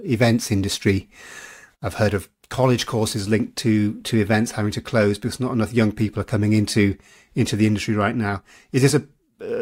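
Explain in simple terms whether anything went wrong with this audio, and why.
Crude rate conversion, from 0 to 3.2 s: the speech was stretched by crudely repeating samples, which fits a 44.1 kHz to 48 kHz change, leaving gritty, unrelated buzzing.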